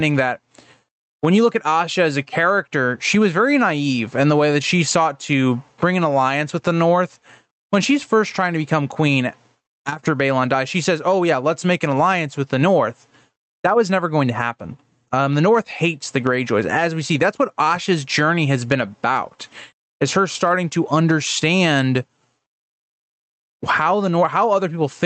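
Throughout the clip there is gain pumping, with a swing of around 20 dB. The likely cause is input gain set far too high, with a fast limiter or compressor clamping down on every peak. Loud and soft passages sit unnaturally close in level. On the waveform the envelope looks flattened against a ceiling.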